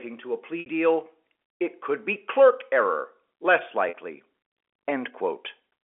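Telephone-band speech, carried as G.711 mu-law within a 300 Hz to 3.5 kHz line, drops out twice through packet loss with pitch repetition. At 0.60 s (60 ms lost) and 3.89 s (50 ms lost), the receiver loops the last pitch period, producing a brief held, buzzy tone that fades before the speech cross-fades back in.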